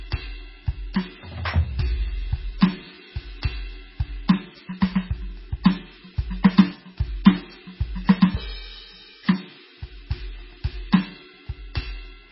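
Heavy MP3 compression likely starved this music clip of bits throughout, consistent with a very low bitrate around 16 kbps. Everything above 5.6 kHz is gone, weak frequency lines flicker in and out to give a watery, swirling texture, and attacks smear.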